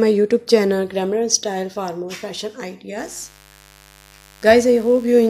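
Mains buzz from 2.98 s to the end: switching spikes on the 50 Hz supply leak into the audio, adding a raspy harmonic buzz around 30 dB below the signal.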